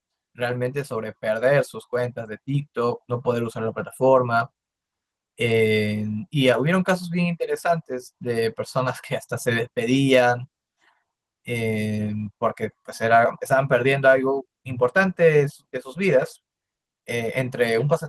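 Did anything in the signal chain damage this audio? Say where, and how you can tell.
No, nothing stood out on listening to this speech that would point to damage at any stage of the signal chain.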